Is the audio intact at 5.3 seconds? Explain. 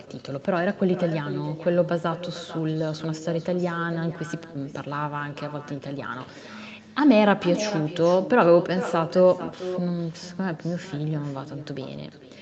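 No. At 5.3 seconds, as everywhere in the clip, the speech is trailed by a quieter, thinner copy of itself arriving roughly 0.4 s later and sitting about 14 dB below the direct sound. This is echo with no canceller: the far end played the call over a loudspeaker, its microphone captured that playback, and nothing subtracted it before it crossed the network back.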